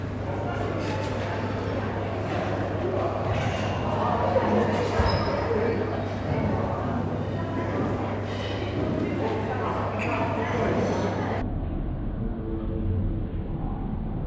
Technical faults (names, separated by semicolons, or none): wrong sample rate